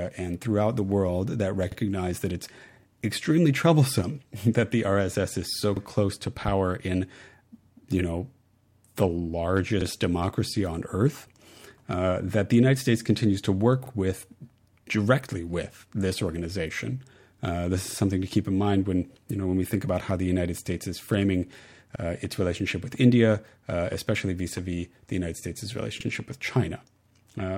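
Overlapping chunks: each 4-second chunk of the speech begins about 48 ms before the previous one finished, so that sliver plays twice at every join. It comes across as a brief click or stutter at 1.72, 5.77, 13.86, 17.91, 21.96 and 26.01 s.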